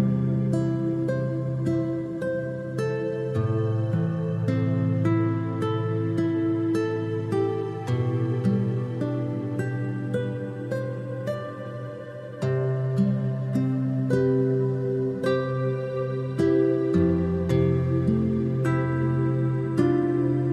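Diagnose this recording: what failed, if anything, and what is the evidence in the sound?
Nothing failed; no faults detected.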